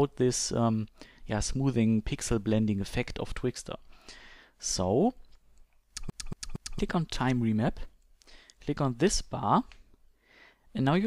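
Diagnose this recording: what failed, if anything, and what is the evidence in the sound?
The fault is at the playback stage: a CD stuck on one turn. From 6.10 to 6.79 s, the same 0.23 s slice of audio plays three times in a row, with a short mute at each jump. This gives the fast, even stutter of a skipping disc. A scratch sends the laser back one track at the same point on each rotation. On a spectrogram, three identical blocks repeat every 0.23 s. The waveform shows matching segments separated by narrow gaps at each jump.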